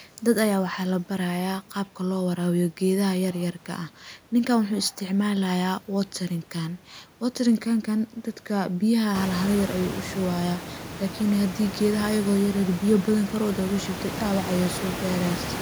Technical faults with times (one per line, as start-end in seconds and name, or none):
none